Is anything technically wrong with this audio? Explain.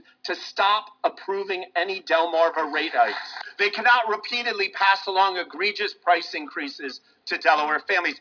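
No, nothing technically wrong can be heard in this audio. There are no dropouts, distortion, glitches or other faults anywhere in the clip.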